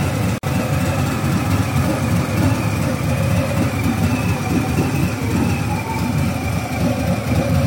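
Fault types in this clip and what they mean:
Gap at a join of encoded pieces: this happens when separately encoded chunks get stitched together without trimming the encoder's start-up delay and the padding on each chunk's final frame, so that dead air stays in. Here you get a hole of about 50 ms, from 0.38 to 0.43 s, where the sound simply drops out. The edges are smeared by the codec, and the sound picks up right where it left off.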